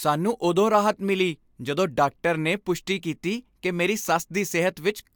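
No technical faults are audible.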